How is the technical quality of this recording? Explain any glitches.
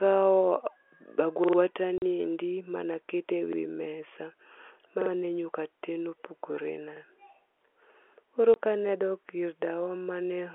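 Two kinds of glitch interrupt this telephone-band speech recording, which is limited to roughly 300 Hz to 3.4 kHz by its G.711 A-law coding: repeated-buffer stutters and short dropouts from packet loss filled with silence.

The repeated buffer occurs at 1.44 to 1.58 s (three extra plays, leading into "ni endi ma ne"), 3.53 to 3.58 s (one), 5.02 to 5.11 s (two), and 6.97 to 7.01 s (one). Each time, the playback device ran short of fresh data and replayed its last block of about 46 ms, which fits a 2048-sample buffer. The result is a brief stutter with hard joins at each repeat.

Packet loss filled with silence appears at 1.98 to 2.02 s, a 40 ms gap just before "ni endi ma ne", and at 8.54 to 8.56 s, a 20 ms gap before "ka ne". Lost packets were replaced with silence, so the speech drops out abruptly, with hard edges. The gap lengths point to 20 ms packets.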